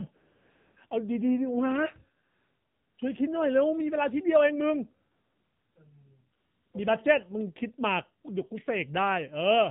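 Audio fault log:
throughout: AMR narrowband mobile codec. The speech was coded at 8 kHz sampling with a pulse-driven vocal-tract model, at a rate that fits the 7.4 kbps mode, so nothing above 4 kHz survives and the speech sounds muffled, buzzy and plainly synthetic.
0.16–0.76 s, 0.88 s, 2.24–2.98 s, 5.12–5.76 s, 6.38–6.74 s: AMR comfort noise. The sender judged these stretches silent and stopped sending speech frames, so the receiver filled the gaps with smooth synthetic noise. The background switches abruptly in and out, the longest gap lasting 740 ms.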